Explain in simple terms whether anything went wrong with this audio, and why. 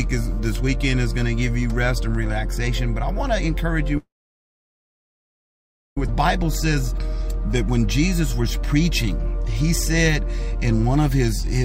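At 3.97 s the sound stops in a call audio freeze. A brief fading buzz or hiss is followed by near silence until 5.98 s. Network packets were likely held up, so playback ran dry. Nothing was lost here. A two-second gap was inserted.

Just after, at 6.09 s, the audio skips ahead. Playback suddenly jumps forward with no pause. About two seconds of sound are missing. The delayed audio was thrown away to catch up, so the two sides are joined almost directly.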